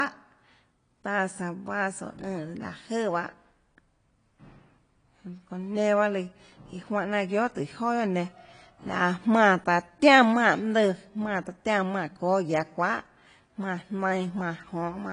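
Speech runs the whole clip with nothing above 10 kHz, a hard shelf on a spectrogram, plus smeared, watery detail; likely low-bitrate audio saved at a high bitrate, pointing to a roughly 32 kbit/s AAC source re-encoded as high-bitrate MP3.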